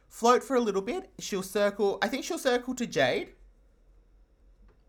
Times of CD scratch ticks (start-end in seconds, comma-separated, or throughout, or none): none